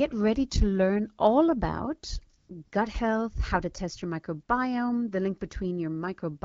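A speech clip with AMR comfort noise right after "to learn all about": from 2.37 to 2.49 s and again from 2.65 to 2.71 s, the real background gives way to smooth, even synthetic hiss as the phone stops sending speech frames. Unlike a dropout, the gaps are filled rather than silent.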